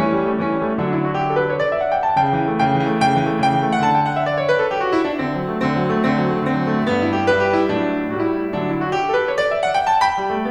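From 2.80 s the music turns thin and hissy: pre-emphasis left on, treble boosted about 14 dB at 10 kHz and never cut back, which fits the FM 75 µs curve.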